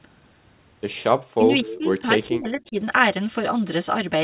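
At 1.33 to 1.45 s, an echo canceller likely caught in double talk treats the near talker as loudspeaker echo and clamps the signal. This is speech suppressed in double talk: the voice drops by around 35 dB for about a tenth of a second, so the sound briefly all but vanishes.

From 1.63 to 2.77 s the same suppression returns, less deep at about 25 dB. Across roughly 700 ms of that stretch the speech dips and breaks into pieces, thinning and dropping out rather than staying level.

Inside that stretch, from 1.66 to 1.78 s, the far side's canceller likely let part of its loudspeaker pickup through and sent it back. This echo leak is a copy of the voice delayed by 241 ms, sitting about 15 dB under the direct speech. It comes across as a short, faint, ghostly repeat trailing the original.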